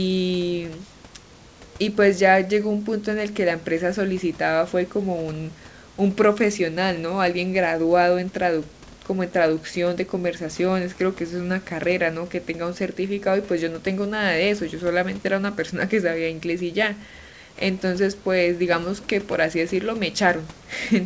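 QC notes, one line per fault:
No faults found.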